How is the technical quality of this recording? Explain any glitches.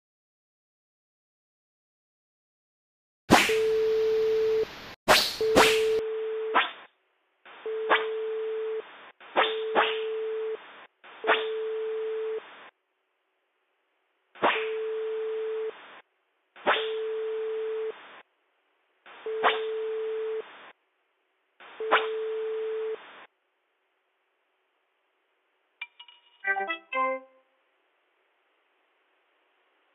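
The recording degrades partway through. From 5.99 s to the end, the sound turns dull and boxy with nothing above 3.6 kHz, drops a little in level, and gains a faint new background noise, with no gap at the change. That points to a likely input switch to a poorer device. A plain low-pass filter would not bring its own noise floor and level shift.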